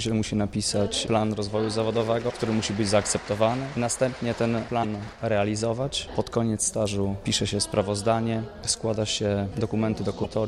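At 2.29 to 2.32 s, 4.82 to 4.85 s and 10.23 to 10.26 s, the sound skips forward and a brief chirp, burst of noise or short hole takes its place. Each glitch lasts about 30 ms, roughly one frame of about 26 ms. The likely cause is a broken MP3 bit reservoir. Frames went missing, so the next frame reached back for borrowed data and decoded bytes belonging to a different frame.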